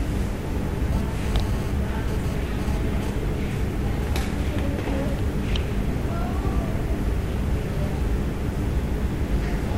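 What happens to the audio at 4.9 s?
Nothing goes wrong at 4.9 s; the audio runs through that moment intact, with no dropout, click, distortion or other fault.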